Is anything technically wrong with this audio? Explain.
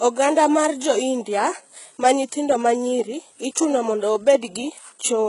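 Yes. Throughout the speech, nothing sounds above 11.1 kHz, and sibilants turn gritty and metallic. This is likely HE-AAC compression at a very low bitrate, around 12 kbps, rebuilding the treble from copied lower bands.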